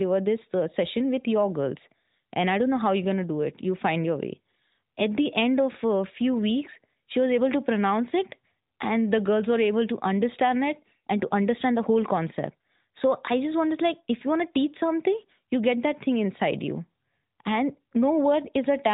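No technical faults can be heard anywhere in this recording.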